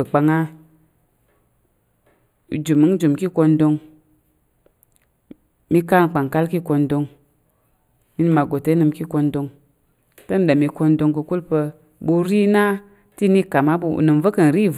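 All the way through the speech there's channel delay causing comb filtering. One side arrives roughly a tenth of a millisecond late, which fits a lag of just a few samples, so the mono sum has its first notch around 5 kHz with further notches evenly spaced above it, leaving everything hollow and phasey.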